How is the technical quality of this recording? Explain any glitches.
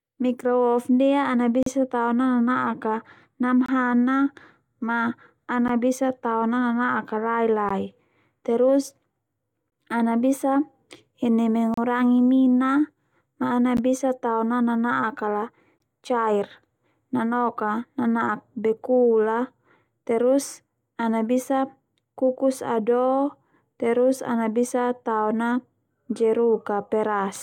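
The speech is marred by a recurring glitch, a gap between stream segments, at 1.63–1.66, 3.66–3.69, 5.68, 7.69, 9.70, 11.74–11.77, 13.77 and 15.78–15.80 s. Segment timestamps leave a 12 to 36 ms hole, filled with hard-edged silence, repeating every 2 s. Unlike a dropout, nothing is lost: speech resumes exactly where it stopped.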